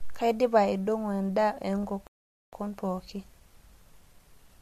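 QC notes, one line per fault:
2.07–2.53 s, rebuffering stall. The speech stops dead and the line goes silent for about 460 ms. Then it picks up exactly where it left off. No syllable is skipped or repeated, so nothing is lost. The playback simply ran short of downloaded audio and waited for more to arrive. That wait adds nearly half a second to the clip, which is heard as a sudden unnatural gap mid-flow.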